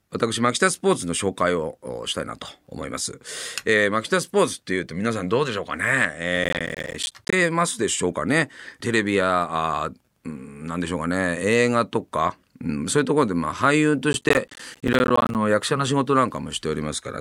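The processor falls behind its audio deadlines twice, from 6.36 to 7.33 s and again from 14.13 to 15.35 s, leaving a run of dropped buffers each time. Every missed buffer of around 10 ms is filled with silence, so the speech is chopped by dozens of tiny hard-edged gaps. This processor overload crackle is heard as a gritty, tearing burst over the speech, the second a little longer, that stops once the load eases.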